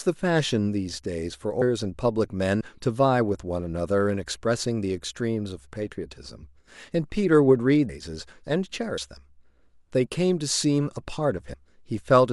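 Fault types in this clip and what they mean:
Compressed frames skipped: at 2.61, 7.89, 8.98 and 11.54 s the speech jumps forward with no pause. Roughly 70 ms, half a second, 70 ms and 150 ms of audio vanish, which fits whole frames of about 32 ms going undecoded. That distinguishes it from a dropout, which leaves silence.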